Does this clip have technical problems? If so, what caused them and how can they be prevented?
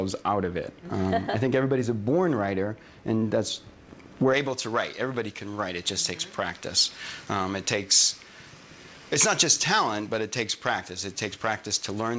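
Yes. From 4.34 s to the end, pre-emphasis is left on. A treble boost, which fits a J.17 curve, was applied and never undone. The sound turns thin, bright and sibilant up to the 8 kHz edge of the call path. Always apply the matching de-emphasis after any pre-emphasis stage.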